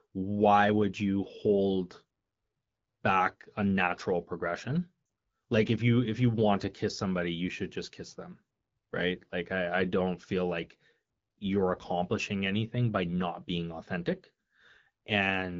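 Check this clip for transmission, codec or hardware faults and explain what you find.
One transmission fault appears: lost AMR speech frames, at 5.05 to 5.09 s, just after "back a natural progression". The gap lasts 40 ms, about two 20 ms frames. Radio errors left those frames unusable, so the AMR-WB decoder filled the hole by carrying forward the last good pitch and vocal tract settings at falling gain. The result is a brief fade to near silence within the two frames rather than a clean cut. That sets it apart from a plain dropout or muting fault, which produces true silence with abrupt edges, often with a click. The speech resumes weak or rough for a moment. The wideband coding itself sounds light and clear, consistent with a rate around 12.65 kbit/s.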